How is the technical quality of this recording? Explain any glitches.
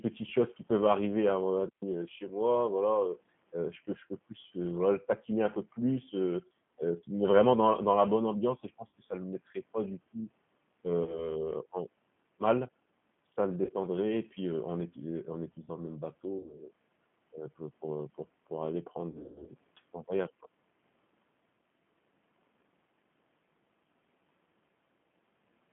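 The recording is low quality: the whole clip is narrowband, codec-coloured telephone speech, with one wireless dropout and six concealed packet losses.

Throughout, the G.729 codec is plainly audible. The speech occupies only about 150 Hz to 3.4 kHz, so it sounds thin and muffled, which fits an 8 kbit/s G.729A link. That codec resynthesises each frame from a vocal tract filter, a pitch predictor and a few excitation pulses rather than the waveform itself. This gives the voice a slightly rough, synthetic texture.

At 1.69 to 1.82 s, between "peuvent arriver à mon" and "heu chez moi", there is a digital wireless dropout. The radio link lost too much data, so the receiver muted its output for about 136 ms. The result is a clean hole of near silence with quick fades at each edge and no noise burst on either side.

VoIP packet loss concealed by the speech codec occurs six times:
4.41 to 4.46 s, between "je peux je peux" and "heu voilà le taquiner", with 20 ms lost (one packet)
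8.87 to 8.92 s, with 60 ms lost
11.03 to 11.37 s, with 40 ms lost
13.65 to 13.73 s, with 40 ms lost
16.38 to 16.57 s, with 80 ms lost
19.12 to 19.51 s, between "heu pour pour aller" and "c'est un voyage quoi", with 200 ms lost in pieces over 280 ms and a longest gap of 140 ms

In each case the decoder filled the gap by extending its last pitch and filter with falling gain. Each loss is heard as a stretched, fading smear rather than silence. The speech stays weak or distorted for a short time afterwards.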